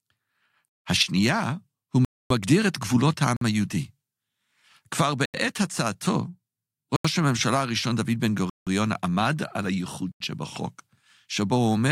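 Seven blocks of digital silence cut into the speech, at 0.68, 2.05, 3.37, 5.25, 6.96, 8.50 and 10.12 s. Each lasts 48 to 256 ms. Five of the lengths fit 4096- and 8192-sample blocks. Each cuts out and back with no fade, leaving a short hole.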